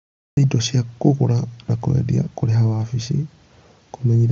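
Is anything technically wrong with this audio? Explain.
Yes. The clip has a cut-off start: it opens on digital silence until 0.37 s, then the speech begins abruptly just before "indo cia kũgũra na", mid-sound, because capture started late. Unlike a fade-in or quiet lead-in, there is no attack or build-up at all. The band-limited headset sound, with nothing above 7.7 kHz, is separate from this.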